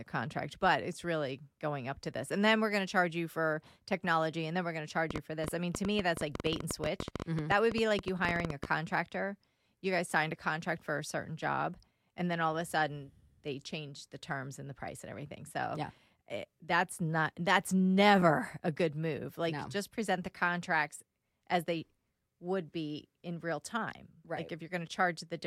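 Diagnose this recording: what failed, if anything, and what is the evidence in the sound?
A train of clicks runs from 5.11 to 8.66 s, just after "then we're going to": around 40 similar ticks at about 11 per second, unevenly spaced, peaking roughly 10 dB above the speech. That's likely interference getting into the analogue wiring or interface.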